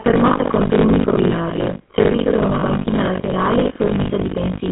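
Buffer tearing runs throughout the speech as a steady robotic buzz at 50 Hz. The writer and the hardware reader have slipped, so roughly two-fifths of each period replays audio about 70 ms old.

GSM full-rate coding is also present throughout, with plainly audible damage. The sound is buzzy and gravelly, and cut off above 4 kHz, which fits the 13 kbps full-rate codec.

Lost GSM frames at 2.6–2.63 s cause a brief rough, metallic ring. About 20 ms of audio, consistent with a single lost frame, was filled by repeating the previous frame's settings.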